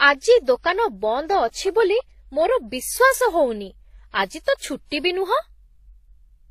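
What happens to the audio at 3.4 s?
Transcoding between lossy codecs is audible at 3.4 s, as throughout the speech. Artefacts from what is likely a low-bitrate HE-AAC encode, re-encoded into WMA, are layered together, and nothing is left above 14.9 kHz.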